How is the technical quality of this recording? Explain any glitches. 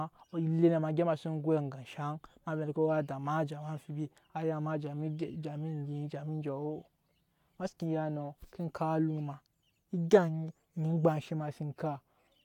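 No technical faults can be heard anywhere in the recording, so there are no glitches to explain.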